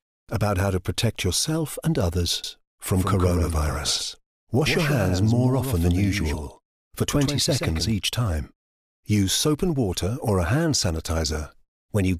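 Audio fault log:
2.44–7.92 s, doubled audio track: a second full-band copy of the speech runs about 150 ms behind the original, roughly 5 dB quieter, producing a distinct slapback with no decay or room colouring. The copy cuts in abruptly at 2.44 s and drops out just as suddenly at 7.92 s. The clean, fixed-offset repeat most likely comes from the same signal being captured again through a slower parallel path, or an edit leaving two misaligned copies stacked.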